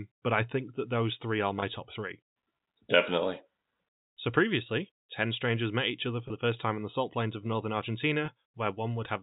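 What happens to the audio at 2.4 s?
Nothing goes wrong at 2.4 s: the audio carries on intact through that moment, with only the narrow telephone bandwidth of G.711 coding that runs through the whole clip.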